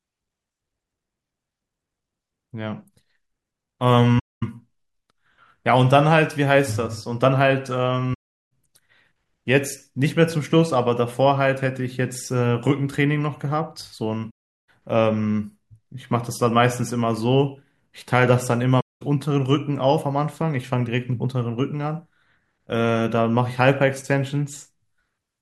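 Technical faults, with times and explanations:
4.19–4.43 s, 8.13–8.49 s, 14.30–14.69 s and 18.80–19.02 s, AAC frame loss with muting: the speech drops into silence for about 0.23, 0.38, 0.38 and 0.21 s, fading out and back in with soft edges. Runs of AAC frames were lost, and the decoder zeroed their spectra. The overlapping transform windows blend the silence smoothly into the surrounding frames. The gap lengths fit roughly 21 ms frames.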